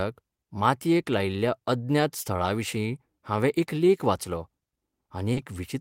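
Clock drift between sender and receiver runs through the whole clip. The sender's clock is roughly 2% slow against the receiver's. The jitter buffer keeps running low, so the receiver has to keep filling in to stay in step.

From 0.36 to 4.94 s come repeated timing corrections. The receiver repeats short slivers of speech, always lengthening, never cutting. Together they add about a tenth of a second. The speech plays at 98% speed.

At 5.33 s there is a short stall from a late packet. The buffer runs dry, and the last sound is held for 30 ms until the packet arrives. Nothing is lost. The held sound is briefly smeared, with a slight buzz or dip.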